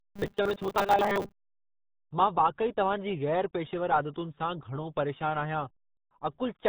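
From 0.01 to 1.34 s, robotic sound from repeated short buffers sets in. The likely cause is audio arriving too slowly, so the playback side keeps looping the most recent fragment and skips about half of the real signal. The loop imposes a rigid 200 Hz buzz, which fits a fragment about 5 ms long. The speech becomes a flat, metallic drone that only loosely tracks the syllables.

The whole clip also passes through the RealAudio 14.4 codec, an 8 kbit/s dial-up speech coder that squeezes the signal hard and discards everything above 4 kHz. The damage is heavy. Consonants lose their edge, the voice sounds muffled and boxy, and a gargling, watery texture runs under every phrase, including the buzzing opening.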